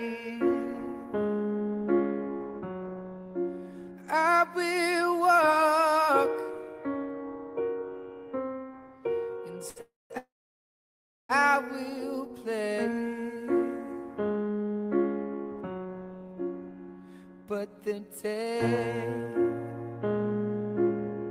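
A short stall from a late packet at 9.69 to 9.78 s holds the last sound for 67 ms with a slight buzz or dip, as the jitter buffer ran dry and nothing was lost. Two call audio freezes follow: at 9.81 to 10.12 s the sound is stretched into a fading buzz or hiss and then about 200 ms of silence, and at 10.18 to 11.31 s a 1.11 s hold includes roughly a second of silence, likely from packets delayed in transit, with playback resuming where it stopped. A jitter buffer speed-up at 15.61 to 15.93 s plays the audio at 114% speed with unchanged pitch, trimming around 50 ms of pitch-period pieces to cut the built-up delay.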